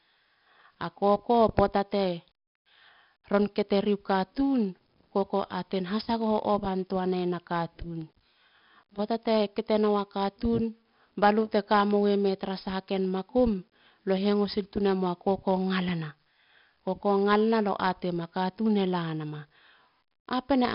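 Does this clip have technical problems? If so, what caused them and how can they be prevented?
Yes. 4-bit ADPCM compression runs throughout: each sample is stored as a coarse step from a prediction, so a level-following gritty hiss rides on the speech and sharp onsets distort. Nothing reaches above 5.3 kHz, and the heavy damage fits a bitrate near 44 kbps. Recording and exporting as uncompressed PCM, or with a modern codec at an adequate bitrate, would prevent it.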